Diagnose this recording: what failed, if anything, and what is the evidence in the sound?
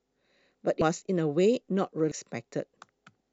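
Codec stage: compressed frames skipped at 0.82 s and 2.12 s; whole 93 ms frames are lost, so speech jumps ahead about 0.2 s and 0.5 s.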